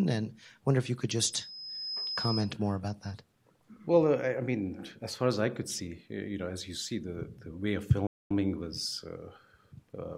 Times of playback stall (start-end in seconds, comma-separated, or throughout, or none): 8.07-8.31